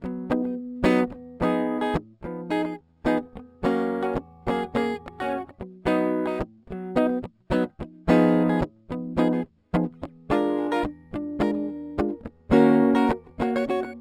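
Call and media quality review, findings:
Imaging from linear upsampling across the whole track: top end sounds dull, with a faint metallic shimmer on the bright parts of the music. Mirror images sit at 6–12 kHz, roughly 40 dB down, which fits a 12 kHz source pushed to 44.1 kHz by straight-line interpolation, a weak resampling filter.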